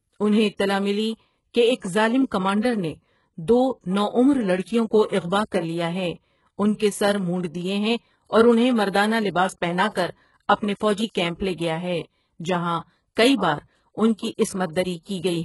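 Throughout the speech, the treble is likely rebuilt by HE-AAC compression's band replication from a very low bitrate near 12 kbps, leaving nothing above 11.5 kHz and making s sounds gritty and metallic.

From 5.07 to 5.12 s, between "نو عمر لڑکیوں کو" and "اغواہ کر لیا ہے", pre-echo appears: the codec spreads block noise ahead of a sharp attack, so a 51 ms hiss precedes it and softens its onset.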